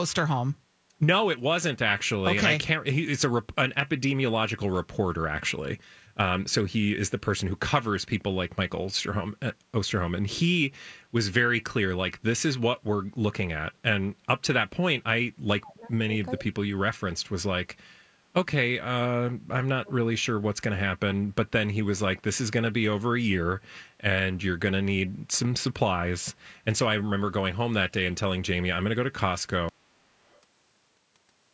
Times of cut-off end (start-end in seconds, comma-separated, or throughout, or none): 29.69-31.53